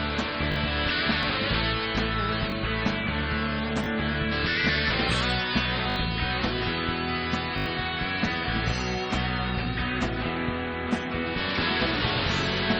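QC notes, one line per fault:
0.52–0.56, 2.50–2.52, 3.84–3.86, 5.90–5.96 and 7.58–7.66 s, repeated buffer: fresh audio arrived late, so the last short slice replayed one to four extra times with a hard join each pass. A 20 ms repeat period suggests a 20 ms buffer, producing brief buzzy stutters and dropping up to around 70 ms of audio.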